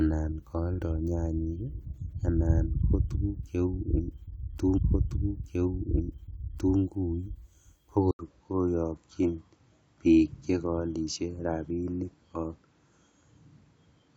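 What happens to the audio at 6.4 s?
At 6.4 s the speech is inside a stream segment repeated, running from 4.77 to 6.77 s. The player queued the same chunk twice. About 2.0 s of speech plays again. A small blip marks the jump back to the earlier point.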